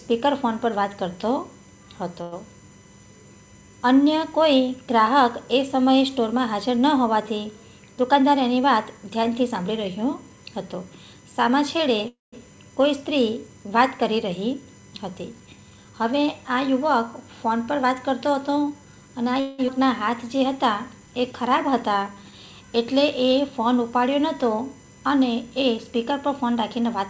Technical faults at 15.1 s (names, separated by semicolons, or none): USB whine; jitter buffer speed-up